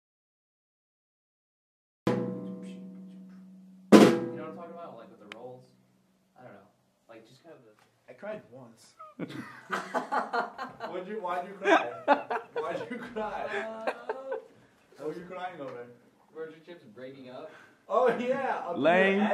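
Right from the top, the clip opens in an audio dropout to silence that runs until about 2.07 s. It's already under way when the file starts, so there's no cutoff to hear, just dead silence with no room tone at all, and then sound arrives abruptly mid-flow. Most likely the input was lost for those first two seconds, say a link or a mute, while the recorder kept writing empty samples, so whatever happened then is simply gone.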